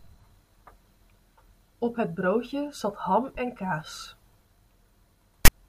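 Right at the end, from about 5.45 to 5.49 s, there's a case of file tags played as audio: a block of text metadata got read as samples, so you hear a short, hard-edged rasp sitting off-centre, then dead silence where the zero padding lands.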